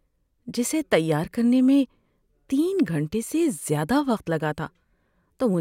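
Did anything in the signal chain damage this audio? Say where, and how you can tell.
No, nothing in the signal chain damaged this speech recording. I can't point to any stage, from wiring through to playback, as having harmed it.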